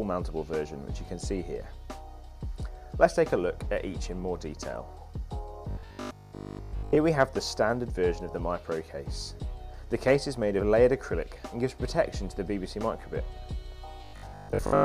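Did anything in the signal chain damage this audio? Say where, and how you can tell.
Yes. Audio likely arrived at the output buffer too seldom, so the driver kept replaying its last short block. This causes robotic sound from repeated short buffers at 5.71 to 6.99 s and from 14.05 s to the end: a rigid 50 Hz buzz, fitting a 20 ms block, replaces most of the sound.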